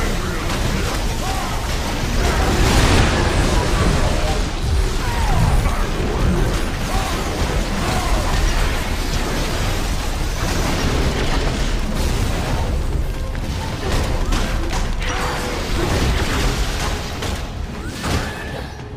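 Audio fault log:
No faults are heard anywhere in this clip. There is nothing to log.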